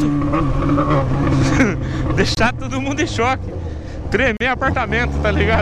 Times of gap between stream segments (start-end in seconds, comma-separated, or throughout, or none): 2.35-2.37, 4.37-4.41